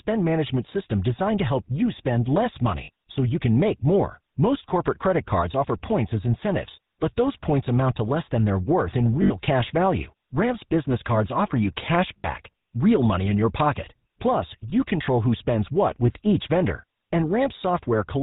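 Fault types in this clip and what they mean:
GSM full-rate codec: throughout the speech, the 13 kbps GSM full-rate coder models the vocal tract and excites it with regular pulses, keeping a third of the excitation samples; everything above 4 kHz is gone, leaving a plainly audible buzzy, gravelly roughness.
Lost GSM frames: at 2.84, 9.22, 12.19, 14.7 and 17.08 s, gaps of 20 to 80 ms, such as after "help you spend less" and "worth in", are filled by repeating the last good frame, heard as a brief rough, metallic ring.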